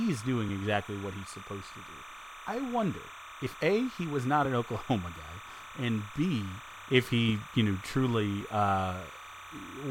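From the first moment to the end of the speech, timecode bleed sits behind the voice: a steady chirping warble about 15 dB below the speech. Linear timecode running at 30 frames per second has leaked in from an adjacent track or cable, and its square wave flips between tones near 1 kHz and 2 kHz. A spectrogram shows two thin horizontal bands at roughly those frequencies across the whole clip, with faint odd harmonics stacked above them.

At 0.49, 2.48, 3.47, 4.45 and 8.41 s there are brief skips caused by overlap between stream segments. The segment time stamps overlap, so the player trims away a few milliseconds of audio that was never actually duplicated, between about 5 and 15 ms each time. The events fall close to whole seconds apart, which fits 1 s segments. On the waveform each one is a sudden discontinuity where the trace jumps. The spectrogram shows a thin full-height vertical stripe at each point.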